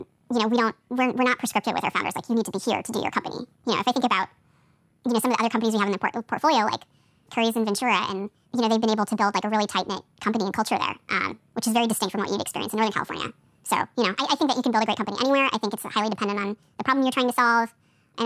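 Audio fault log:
throughout, wrong sample rate: the speech runs high and hurried, about 1.45 times too fast and pitched up about 6.5 semitones, so voices sound thin and chipmunk-like. Speed and pitch shift together by the same ratio because the samples are being read out faster than they were captured, with no rate conversion. The 1.45 ratio fits audio recorded at 22 kHz being played back at 32 kHz.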